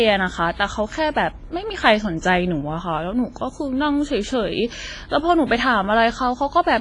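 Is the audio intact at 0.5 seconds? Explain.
No. At 0.5 seconds the speech carries the same damage that runs through the whole clip, which sounds like heavy WMA compression. The encoder likely split the signal into long transform blocks and quantised them coarsely, so the noise smears across tens of milliseconds and weak detail gets zeroed out. You hear a washy, ringing quality with hiss that swells and fades with the sound, and nothing above 10.5 kHz, which points to a low bitrate of around 24 kbps.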